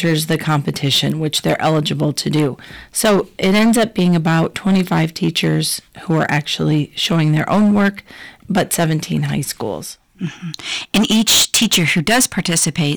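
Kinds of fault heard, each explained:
Hard clipping: the speech was driven about 19 dB past what a stage could pass, so peaks are sliced flat, with roughly a tenth of the samples cut, giving a harsh fuzz on loud sounds.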